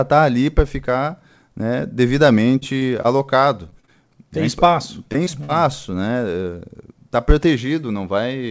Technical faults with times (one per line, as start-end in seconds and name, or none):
2.60-3.90 repeated packet loss (robotic sound)
5.12-5.50 short concealed packet loss